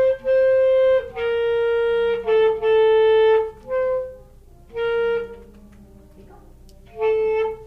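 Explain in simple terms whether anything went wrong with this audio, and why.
Nothing went wrong with this recording of sounds. At no point does anything happen to the audio that points to a technical problem.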